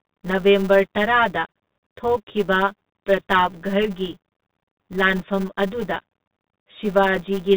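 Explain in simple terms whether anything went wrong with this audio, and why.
Three things went wrong, and all of them last the whole clip.

Channel delay (comb filtering): one channel runs about ten milliseconds late, so when the two are mixed they cancel at evenly spaced pitches, making the speech sound hollow and phasey.

Bluetooth CVSD headset codec: the speech passed through a low-grade headset link that drops everything above 4 kHz, leaving it muffled, with scratchy s sounds and a grainy hiss underneath.

Filter restarted on every block: a processing step forgets where it left off and restarts many times a second, adding a steady 200 Hz buzz that grows louder with the speech.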